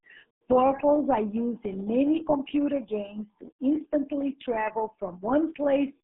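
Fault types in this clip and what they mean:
RealAudio 14.4 codec: the speech sounds muffled and gargly throughout. It is confined to a 150 Hz to 3.7 kHz band with nothing above 3.9 kHz and is heavily smeared, which fits the 8 kbit/s RealAudio 1 dial-up codec throwing away detail.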